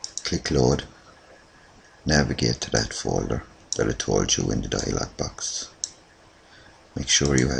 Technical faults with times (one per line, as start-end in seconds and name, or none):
none